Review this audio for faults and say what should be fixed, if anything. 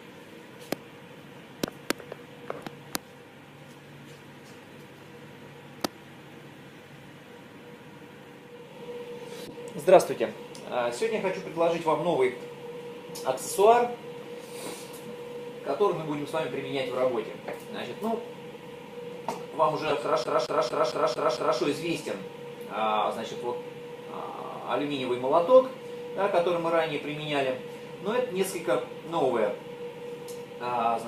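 Two corrupt-frame events were decoded. The first runs from 9.47 to 9.54 s and the second from 19.87 to 19.92 s. Each is a brief burst or blip. Its length fits roughly two damaged frames. Flipped bits made the decoder apply wrong gains or misread codes, so energy landed at the wrong frequencies. The second error is much louder, peaking around -10 dBFS against about -30 dBFS. Add error detection and concealment so damaged frames are muted or replaced instead of played.

From 20.24 to 21.60 s the CD is stuck on one turn. A 0.23 s slice of audio plays six times in a fast, even stutter. There is a short mute at each jump. This is the pattern of a scratch throwing the laser back one track at the same point on every rotation. Because the repeat length matches one disc turn, the loop stays regular. Rip with a secure, error-checking drive, and replace or resurface scratched discs.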